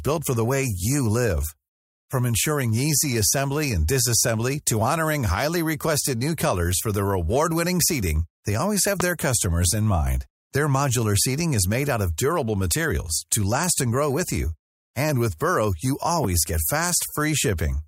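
At 9.00 to 9.03 s a single loud pop cuts in. It stands well above the speech, roughly 15 dB over it. The speech carries on underneath without a break. A second loud pop follows at 16.24 to 16.27 s, also single and lasting about 25 ms, around 10 dB above the speech. Each sounds like a sharp pop. The likely cause is a brief voltage spike, from a switch, a connector or static, entering the signal path.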